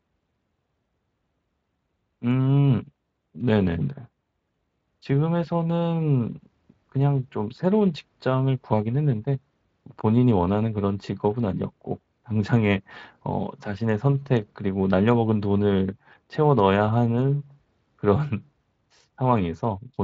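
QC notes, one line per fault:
Nothing stood out on listening to this speech.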